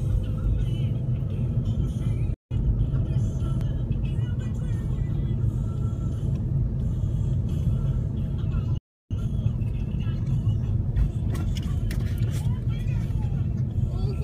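Playback stalls cut the audio to silence at 2.34 to 2.51 s (about 170 ms) and 8.78 to 9.11 s (about 330 ms), likely because the player ran short of buffered data or its thread was blocked. After each gap comes time-compressed catch-up: from 2.51 to 3.17 s and from 9.11 to 10.41 s the audio runs at 1.25 times normal speed with unchanged pitch. Short segments are being dropped and cross-faded to clear the backlog.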